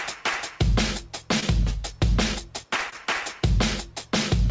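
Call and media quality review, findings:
Brief smear at 1.40–1.44 s and again at 2.90–2.94 s. Short concealed packet loss: about 20 ms of audio missed the decoder each time, bridged by extrapolating the preceding sound, then crossfaded back. Band stops at 8 kHz, consistent with a G.722 call leg.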